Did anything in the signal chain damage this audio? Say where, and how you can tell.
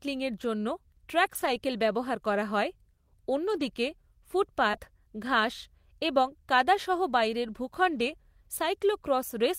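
Yes. The network stage lost packets, and the codec's lost packet rebuilt from error correction covers them. There are rougher, noisier stretches at 1.25–1.47 s (120 ms, before "ব্যবহার করা হয়"), 3.47–3.61 s (80 ms) and 4.73–4.75 s (20 ms). The decoder played the low-bitrate copies carried in following packets, so no gap opens.

There is also a short concealed packet loss at 4.71–4.75 s, just before "ঘাস এবং কাদা সহ". About 20 ms never arrived in time. The decoder extended the preceding sound to fill it, then crossfaded back. You hear a brief smear.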